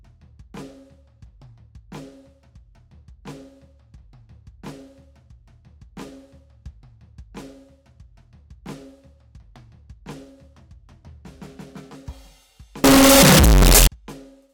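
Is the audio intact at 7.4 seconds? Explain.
Yes, the music plays through 7.4 seconds without any audible fault.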